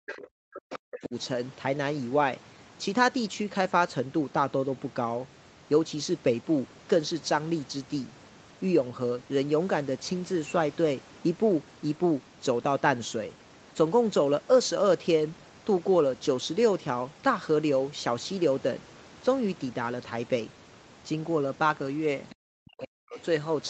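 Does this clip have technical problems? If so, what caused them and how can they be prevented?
Yes. Speech suppressed in double talk: during 0 to 1.15 s and 22.54 to 23.18 s, the echo canceller likely mistook overlapping talk for echo and ducked the talker, by as much as roughly 40 dB. Better double-talk detection and full-duplex tuning would prevent it.

Other side's voice leaking through: at 0.09 to 0.18 s, 0.7 to 0.79 s and 22.3 to 22.35 s, residual loudspeaker echo likely escaped cancellation, faint scraps about 15 dB below the speech, then about 30 dB below. Headphones or stronger echo suppression would prevent it.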